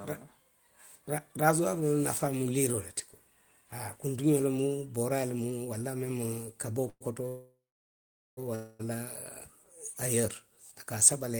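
Three call audio freezes occur in the speech, at 6.89–7.03 s, 7.29–8.39 s and 8.55–8.81 s. In each, the last sound is stretched into a fading buzz: about 117 ms ending in 40 ms of silence, then about 1.08 s of which 820 ms is silence, then 243 ms with no silence. Speech resumes where it stopped, with nothing lost, but each gap adds delay. The likely cause is delayed packets emptying the jitter buffer.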